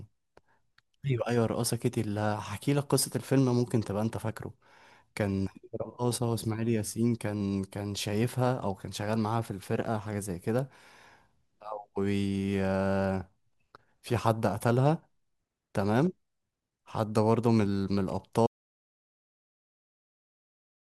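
The input was likely lost at 18.47 s, leaving silence written to the end: an audio dropout to silence, with the speech cut off mid-flow and no room tone.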